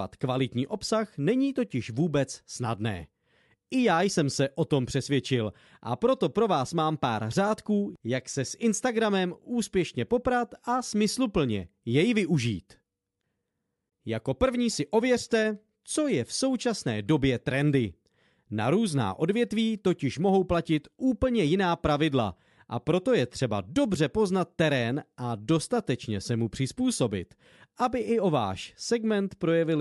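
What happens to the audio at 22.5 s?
Nothing goes wrong at 22.5 s; the speech there plays through intact, with no break, glitch or distortion.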